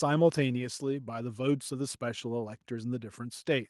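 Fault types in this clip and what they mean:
No technical faults can be heard anywhere in this speech recording, and the signal remains intact throughout.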